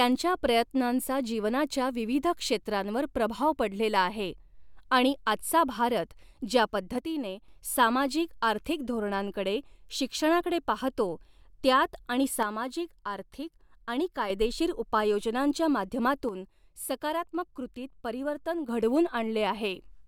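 A speech clip where the level sags abruptly by about 6 dB three times: from 6.98 to 7.48 s right after "आणि आजचा भारत ज्या", from 12.43 to 14.3 s after "शिक्षणाकडे पाहतो त्यात आणि", and from 16.29 to 18.69 s. That's likely one channel drops out, halving the mono sum each time.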